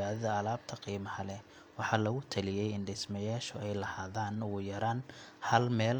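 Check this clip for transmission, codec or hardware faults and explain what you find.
The speech signal holds steady throughout, with no audible technical problem at any point in the recording.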